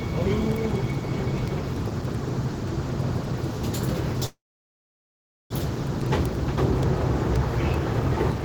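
A recording of everyday sounds carries word clock ticks from 0.13 s to the end at 8.44 s: sharp clicks roughly every 0.05 s, each slipping one sample, consistent with a receiver clock running around 400 ppm off the sender. From 4.27 s to 5.53 s there is a call audio freeze: the last sound decays into about 1.1 s of silence, likely from an emptied jitter buffer, then resumes without loss, 1.24 s late.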